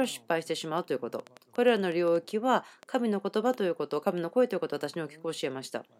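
From 0.04 s to 3.55 s, a train of clicks runs over the speech. About fifteen sharp pulses arrive at an uneven pace, averaging roughly 3.7 per second. Each click has much the same short, hard shape. They sound like ticking or popping and stand out in the pauses too. The loudest peaks rise about 5 dB above the speech. The likely cause is interference from nearby equipment or a faulty connection or power supply injecting repeated pulses.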